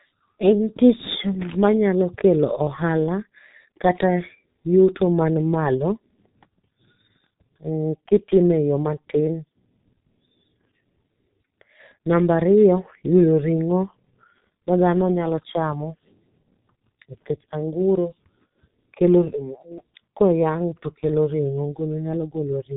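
Muffled, hoarse speech runs through the whole recording, with consonants smeared together and nothing bright above 4 kHz. This is G.723.1 codec damage, and it is heavy. The codec models the voice in 30 ms frames and refreshes that model slowly, so quick consonant transitions blur. At a bitrate that fits a stream of around 6 kbit/s, too little detail survives to keep the speech crisp.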